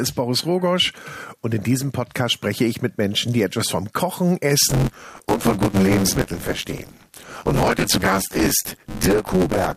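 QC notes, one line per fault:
4.69–9.76 s, buffer tearing: from 4.69 s to the end, a steady robotic buzz at about 93.8 Hz rides on the sound. Writer and reader have slipped and cross within each period, so roughly half of every buffer replays audio from about 20 ms earlier, with hard joins on both sides. The repeat rate fits a 512-sample buffer. Unlike dropouts or random crackle, nothing goes silent and the rattle is strictly periodic and tracks the signal.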